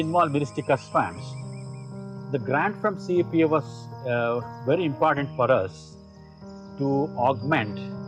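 Nothing stood out on listening to the clip.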